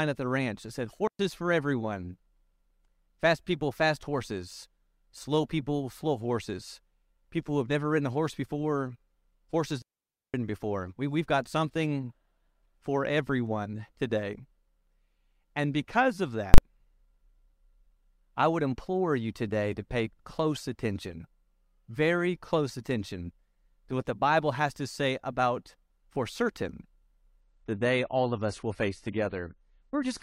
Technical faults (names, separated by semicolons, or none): digital wireless dropout; invalid numbers at full scale; adaptive stream at a lower bitrate